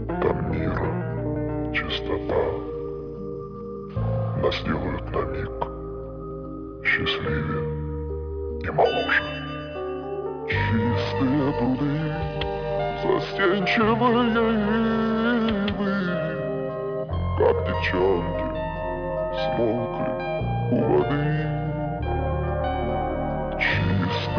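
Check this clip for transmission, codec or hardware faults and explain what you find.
Nothing wrong can be heard anywhere in this recording.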